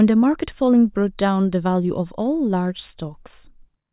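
No technical faults can be heard anywhere in this speech recording, with the signal holding steady and continuous throughout.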